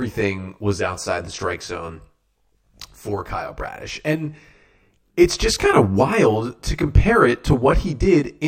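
Channel delay (comb filtering) runs through the whole speech clip. One channel reaches the mix roughly 20 ms behind the other, and when the two are folded to mono, the material they share cancels at a regular series of frequencies, starting around 30 Hz and repeating closely up the spectrum. With a lag this long, the fixed notches sit so densely that the speech takes on a rough or slightly doubled character rather than a simple hollow tone.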